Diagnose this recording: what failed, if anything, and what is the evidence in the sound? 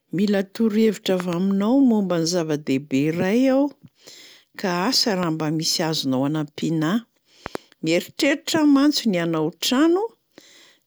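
Loud pops in the analogue wiring: a double pop from 1.20 to 1.35 s, a single at 5.23 to 5.25 s, and another double from 7.46 to 7.57 s. Each is roughly 10 dB over the speech, which carries on underneath. Likely a voltage spike from a plug, switch or static.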